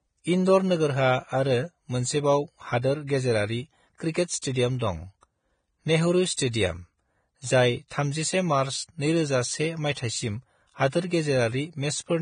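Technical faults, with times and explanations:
throughout: Vorbis compression. Heavy coding at a low rate, which fits a bitrate near 23 kbps and is likely from a Vorbis encoder, removes everything above 9.7 kHz. It quantises the remaining treble so coarsely that fine detail turns to noise, leaving the speech hissy, grainy and dull.
4.12 to 4.15 s, 4.79 s and 6.36 s: pre-echo. The codec spreads each block's quantisation noise across the whole block, so a brief hiss arrives before these sharp onsets. It lasts about 35 ms at the first and 19 ms at the other two, smearing each attack.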